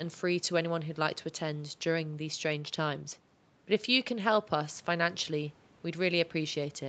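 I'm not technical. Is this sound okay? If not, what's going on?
Yes, no faults heard.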